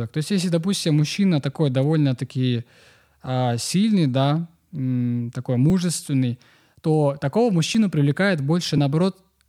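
From 5.7 to 8.78 s, after "сильный да э такой", periodic USB or driver dropouts skip a couple of milliseconds every 1.02 s, leaving about four ticks whose strict even spacing distinguishes them from random clicks.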